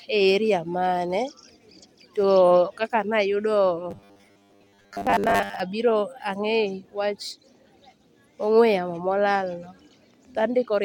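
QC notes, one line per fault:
3.91 to 5.61 s, robotic sound from repeated short buffers: for this stretch the speech flattens into a stiff, metallic buzz at a fixed 100 Hz, though it still roughly tracks the words. That's likely the playback running short of fresh audio and looping the last tiny chunk, about 10 ms, to fill the gap, with most of the real audio in that span skipped. The chunk length sets the buzz, since one loop every 10 ms gives 100 Hz.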